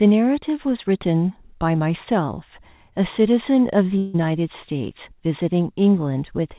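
A speech recording carried over a call path whose narrowband coding leaves nothing above 4 kHz, as a G.711-style telephone codec would. From 3.98 to 4.16 s the sound gives way to a synthetic buzz or hiss stretched from the preceding audio, which fades without dropping to silence before the speech resumes with a piece missing. This is likely a long network dropout. It differs from a brief packet-loss glitch in its length, about 0.16 s, and in the decaying filler replacing the lost audio.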